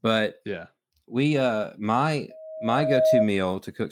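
Right after "yeah we uh my", at 2.30 s, a loudspeaker feedback squeal kicks in: the mic's catching its own speaker, and at 633 Hz the loop gain tops one. The tone swells over most of a second, ends up a few dB above the speech, and cuts off at 3.30 s.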